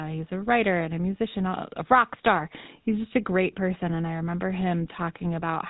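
GSM full-rate codec damage runs through the whole clip, from start to finish, and it is plainly audible. The codec reduces speech to a model of the vocal tract excited by a regular pulse train, keeping only every third excitation sample, which fits a 13 kbps full-rate mode. That coarse excitation gives the speech a buzzy, gravelly roughness, and nothing survives above 4 kHz, so the top end sounds dull and boxed in under the call's normal microphone filtering.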